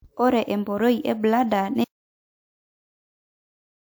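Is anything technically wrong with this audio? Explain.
Yes. From 1.84 s to the end, the speech cuts out into dead silence with no room tone, an audio dropout to silence, likely from the input being lost while recording continued.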